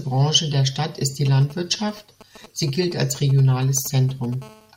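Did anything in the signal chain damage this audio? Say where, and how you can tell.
Yes. GSM signalling bursts enter at the analogue wiring stage from 1.27 to 4.34 s, starting just after "ist die". Galloping clusters of short 217 Hz buzzes sit roughly 20 dB under the speech, as the circuit rectifies a nearby 2G phone's radio bursts. A spectrogram shows grouped vertical stripes carrying a comb of 217 Hz harmonics.

A GSM phone buzz, also picked up in the analogue wiring, runs from 4.42 to 4.72 s. It is a continuous, raspy 217 Hz buzz about 25 dB below the speech and unrelated to it, from the phone's steady call transmission being rectified. The spectrogram shows unbroken horizontal lines at 217 Hz multiples, and the waveform shows a regular pulse train.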